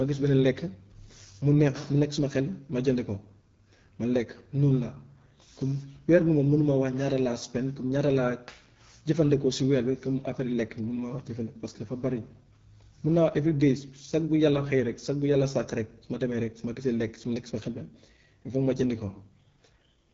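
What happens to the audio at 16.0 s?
At 16.0 s the speech sounds rough and raspy, a quality that runs through the whole clip. This is the AMR wideband (HD Voice) codec: a pulse-driven vocal tract model codes speech up to 6.4 kHz with too few bits, which fits a low rate near 8.85 kbit/s.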